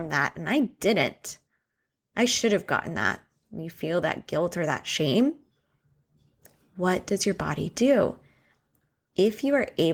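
Nothing stood out on listening to this speech recording.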